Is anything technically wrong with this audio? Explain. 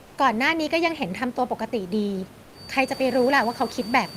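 Yes, two things stand out. From 0.01 to 0.13 s there's comfort noise in place of the background: for about 120 ms the real room tone gives way to a smooth, featureless hiss, about 2 dB quieter. It's likely discontinuous transmission, which fits Opus DTX, where the receiver fills the gap with synthetic noise.

From 2.47 s to the end there's a feedback whistle, a thin, steady tone at 4.6 kHz sitting roughly 20 dB under the speech and swelling and fading slowly. It's likely a speaker-to-mic loop hovering right at the edge of feedback, while the room noise picks up around 3 s.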